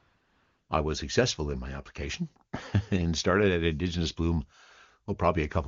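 From 0 to 0.69 s, AMR comfort noise fills the opening. The phone judged this stretch silent and sent no speech frames. The receiver generated a smooth, steady synthetic hiss in place of the real background. It then switches off when the wideband speech begins.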